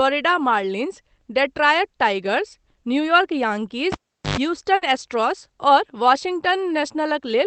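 At 3.92 s the cable is pulled and plugged in while live, and the disturbance runs to 4.37 s. A pop marks the break, then about 0.40 s of near silence while the connector is out. As it goes back in, only the tip makes contact for about 0.10 s, letting in a raw 50 Hz mains buzz. A second pop follows when the plug seats fully and the sound returns.

A burst of packet loss follows from 4.75 s to 4.84 s. About 60 ms of audio failed to arrive in time, so the receiver extended the last sound it had and faded it across the gap. When real audio resumes, the 60 ms that should have filled that span is gone. The gap sits inside a call path whose top end stops at 8 kHz, which fits a low-bitrate Opus stream.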